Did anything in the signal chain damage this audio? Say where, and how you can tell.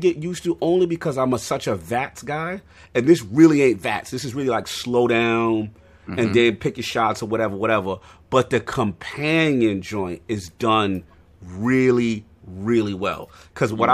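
No, nothing stood out on listening that would point to damage at any stage of the signal chain.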